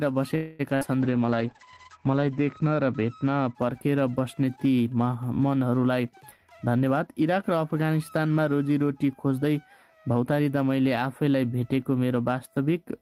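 Right at the start, from 0.35 to 0.61 s, the sound stops moving forward and is stretched out as a held, fading continuation of the last bit of audio for about a quarter of a second. It then carries on exactly where it left off, with nothing skipped. That's a call audio freeze, most likely packets delayed in transit so the jitter buffer ran dry. The receiver filled the wait, which pushes everything after it back by about the same amount.

Shortly after, from 0.75 to 0.83 s, there's a burst of packet loss. Here packets never made it in time, so the receiver patched a gap of about 55 ms by continuing the last sound and turning it down as it went. When the audio comes back it has jumped ahead, and about 60 ms of the original is gone.

Then from 1.02 to 4.23 s you get a call bitrate drop. The encoder was pushed from 32 kbps down to 10 kbps, sitting at the bottom for about 1.1 s. At that rate it codes coarsely and narrows the bandwidth from 20 kHz to 8 kHz, so the sound goes rough and loses its top end. 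By 4.23 s the bitrate has recovered and the detail returns.

Finally there are two jitter buffer speed-ups. From 5.91 to 7.58 s the audio runs at about 111% speed, and from 10.08 to 10.40 s at about 110%. Both times the buffer was holding more than it wanted, so the receiver kept snipping out short pitch-period chunks to catch up. That trimmed roughly 200 ms in the first stretch and about 40 ms in the second. Pitch stays put, but both passages come across as noticeably hurried.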